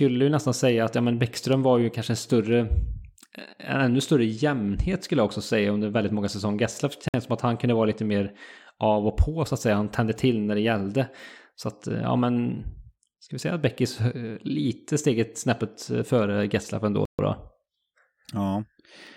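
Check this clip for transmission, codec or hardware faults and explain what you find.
Two short dropouts to silence break up the speech. At 7.08 s the sound cuts out for 55 ms and resumes just before "som att han kunde"; at 17.05 s a longer 134 ms gap occurs. Each is likely a Bluetooth stall: radio interference delayed packets, the receiver's buffer emptied, and playback halted until retransmissions caught up. Unlike codec concealment, which smears or repeats audio, these gaps are plain silence, and the speech then resumes.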